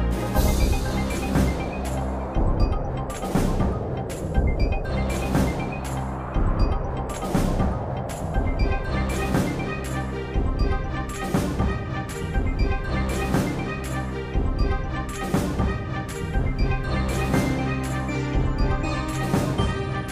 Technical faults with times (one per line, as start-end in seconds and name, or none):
none